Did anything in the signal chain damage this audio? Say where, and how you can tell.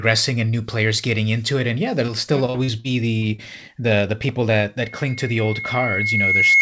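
Yes. The first damage is in the network stage, at 2.06 to 2.10 s. There is a brief smear in the speech there. It is short concealed packet loss. About 20 ms of audio never arrived in time. The receiver covered the gap by extending the preceding sound, then faded back into the real signal. The hole is too short to hear as a dropout. It reads as a blur rather than a silence.

Worse network trouble follows from 2.46 to 3.40 s. The speech turns choppy across that stretch, with pieces missing. This is repeated packet loss, the robotic sound. Six separate gaps fall within under a second, the longest 42 ms. Roughly a fifth of that span is synthetic fill. Each new hole follows soon after the last. The constant switching between real and guessed audio makes it sound mechanical.

The third fault is acoustic, in the analogue loop between loudspeaker and microphone. From 4.81 s to the end, a steady 2.2 kHz tone swells up. 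This is a loudspeaker feedback squeal. At that frequency the loop gain exceeds one, so the tone feeds itself. It builds over roughly two seconds and ends up about 10 dB above the speech. The band limit near 8 kHz is just the G.722 call codec working normally.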